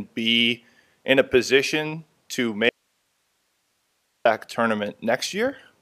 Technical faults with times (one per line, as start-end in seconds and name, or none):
2.69-4.25 audio dropout to a faint residue